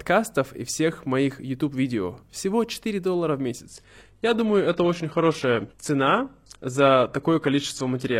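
Adaptive stream at a lower bitrate from 3.67 s to 8.20 s: the player switched suddenly, with no gap, to a poorer version. The speech loses everything above 12.3 kHz and its treble turns synthetic, which fits a drop to a 16 kbit/s HE-AAC stream.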